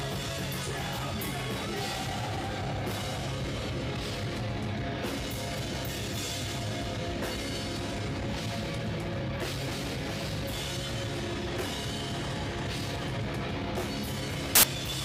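Samples built from the wrong bytes appear from 14.55 to 14.63 s, an 80 ms burst of loud, harsh broadband noise near the end of the audio. Here the reader has assembled each sample from its bytes wrongly, whether shifted by one byte, in swapped order or on the wrong alignment, so the rapidly fluctuating low-order bits land in the most significant position. The result replaces the real waveform with harsh broadband noise at high level.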